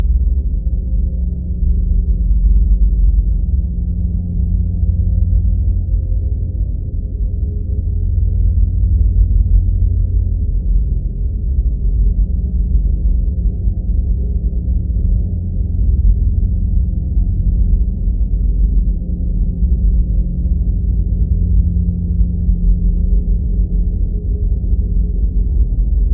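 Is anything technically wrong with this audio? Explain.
No, nothing in this audio stood out as technically wrong on listening.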